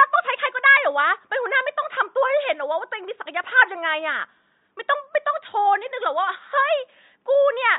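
From start to finish the speech sounds watery and swirly, with dull treble, metallic chirps on s sounds and smeared consonant attacks. This is likely MP3 compression at a low bitrate, fitting about 33 kbps, where the encoder cuts high frequencies and drops weak components frame to frame. Faint room noise sits about 54 dB below the speech.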